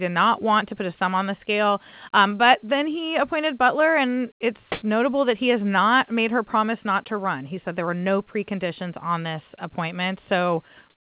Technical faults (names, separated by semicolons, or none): comfort noise in place of the background